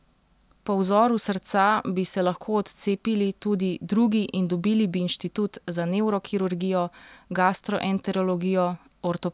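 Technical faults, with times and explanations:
No technical faults can be heard anywhere in the recording, which carries its speech without any disturbance to the signal.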